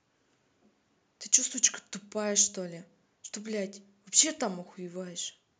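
Just a short stretch of speech, and nothing technically wrong shows up anywhere in it.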